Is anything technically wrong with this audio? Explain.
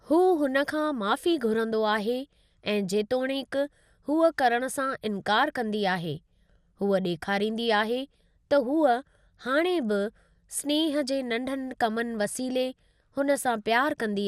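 Yes. The speech carries plainly audible coding damage from start to finish, likely from MP2 compression. Nothing is present above 15.8 kHz, so the top end sounds dulled. A gurgling, granular roughness sits on the speech throughout. MPEG Layer II splits the signal into 32 equal sub-bands and divides its bits among them. When bits run short, upper bands switch off and the remaining ones are quantised coarsely. The damage fits a low rate around 80 kbps.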